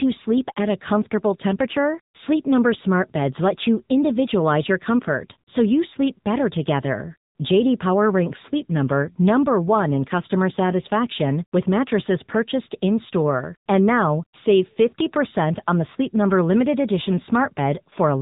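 From start to finish the speech carries the sound of the AMR narrowband mobile codec. Nothing above about 3.8 kHz survives, so sibilants lose their edge and the voice sits in a boxed, telephone band. The bandwidth points to AMR-NB at 8 kHz sampling, and the plainly audible damage fits a mode near 7.95 kbps. Here a vocal-tract model excited by sparse pulses rebuilds the voice, giving it a buzzy, synthetic grain.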